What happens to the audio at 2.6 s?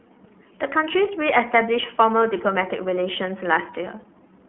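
iLBC codec at 2.6 s, as throughout the clip: each 30 ms frame's excitation is coded on its own, leaving speech audibly rough and synthetic with nothing above 3.8 kHz, consistent with the 13.33 kbps mode.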